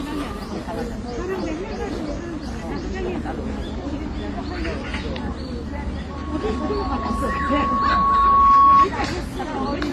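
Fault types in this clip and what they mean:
Transcoding between lossy codecs: The whole clip has that stacked-compression texture: smeared, swirly detail with a few kinds of artefact layered on one another, and nothing above about 15.6 kHz. That's likely from the audio passing through several lossy encoders in a row, with something like HE-AAC and Opus at low rates and then a WMA-style stage on top. Each pass spends bits re-coding the previous damage, and the lowest band limit in the chain sticks.
Loudspeaker feedback squeal: From 6.10 s to 8.88 s a single tone at 1.1 kHz creeps in and keeps swelling. It takes roughly three seconds to build, so it's still growing for most of that stretch, and it ends up around 15 dB louder than the rest of the sound. That's a mic hearing the speaker it feeds, with the loop gain above one at that frequency, so the tone keeps feeding on itself.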